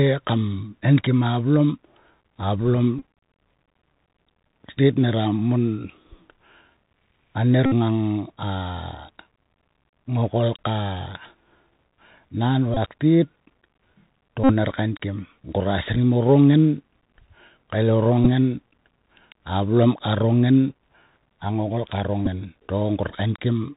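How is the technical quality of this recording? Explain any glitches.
Technical quality is limited. The speech carries the narrowband sound of a headset link, and six short packet glitches break into it.

Bluetooth CVSD headset codec, throughout the clip: each sample at 64 kHz is coded as a single up-or-down bit with an adapting step size. Nothing above 4 kHz gets through, loud high sounds smear and distort, s sounds turn scratchy, and a granular hiss sits under the speech.

Bluetooth headset packet repeated at 2.99–3.02 s, 7.66–7.73 s (just before "ngang a"), 12.74–12.77 s, 14.44–14.52 s (just before "ner kainkim"), 18.24–18.27 s and 22.26–22.28 s (just after "a ngokol ka"). Each time, lost packets were replaced by decoding the previous one again. The longer losses, 49 to 60 ms, give a brief buzz near 267 Hz. The last two lose 11 ms each.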